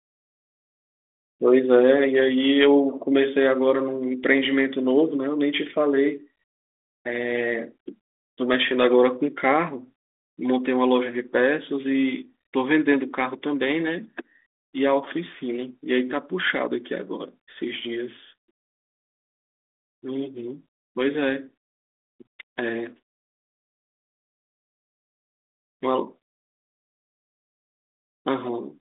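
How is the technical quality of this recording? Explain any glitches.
No glitches to point to here: the speech comes through a telephone-style G.726 link at 32 kbit/s with its usual narrow band of roughly 250 Hz to 3.6 kHz and only light coding grit, and nothing else breaks in along the way.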